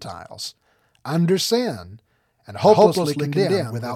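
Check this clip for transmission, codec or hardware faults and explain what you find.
One fault is present. A doubled audio track begins at 2.62 s, just after "under sin and", and continues to the end. A second full-band copy, about as loud as the original, trails it by roughly 150 ms, likely from a slower second capture path or an out-of-step edit. It cuts in abruptly and has no decay or room colour.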